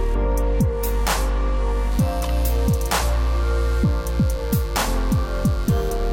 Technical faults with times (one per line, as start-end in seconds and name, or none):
1.91-6.12 mains buzz